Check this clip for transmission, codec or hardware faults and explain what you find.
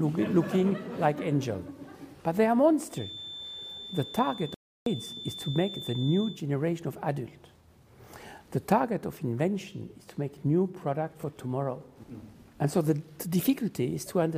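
One fault shows up: a playback stall. At 4.54 s the sound cuts to silence for about 0.32 s, resuming at 4.86 s, likely because the player starved of data or its thread blocked.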